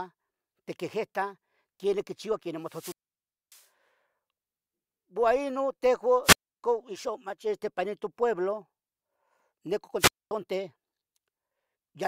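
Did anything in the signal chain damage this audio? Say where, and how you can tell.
Yes. The wireless link caused wireless microphone squelch dropouts at 2.64–3.66 s, 6.23–6.63 s and 9.98–10.31 s. Each event brings rising hiss, then near silence, then the speech returns. The mutes last about 0.6 s, 0.3 s and 0.24 s. The RF signal faded, and the receiver's squelch cut the output.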